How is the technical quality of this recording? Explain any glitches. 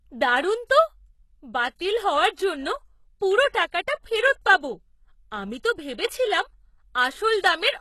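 The technical quality is compromised by audible codec damage throughout and one brief glitch near the start of the speech.

Throughout, the likely cause is HE-AAC compression: spectral band replication rebuilds the treble from copied lower bands, so sibilants turn gritty and metallic. Nothing sounds above 12.3 kHz, which fits a bitrate around 16 kbps.

From 0.67 to 0.70 s, pre-echo occurs: quantisation noise spread across a transform block smears about 29 ms of hiss ahead of an attack, softening its onset.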